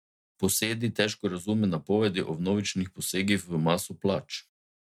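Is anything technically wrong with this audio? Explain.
No, nothing is technically wrong with this speech recording. No dropout, distortion or other playback fault can be heard anywhere in it.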